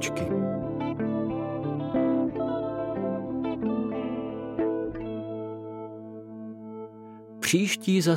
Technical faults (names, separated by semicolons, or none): none